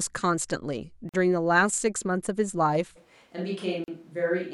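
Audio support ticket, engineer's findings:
Gap at a join of encoded pieces: silence at 1.09–1.14 s (46 ms) and 3.84–3.88 s (40 ms) in continuous speech. Separately encoded segments were joined with encoder start delay and end padding left in. Edges are smeared. Speech resumes exactly where it stopped, unlike a dropout that loses material.

Switch to a distant microphone: from 2.98 s to end, voice suddenly roomy and hollow, thinner bass, level down about 5 dB, room noise about 35 dB below speech. Likely cause is close-mic signal lost and a farther mic used. Added room and noise rule out a simple gain drop.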